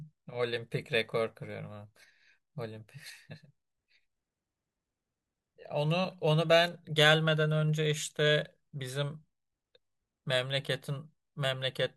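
Listening to the speech turned up nothing that stood out as a technical fault at any point.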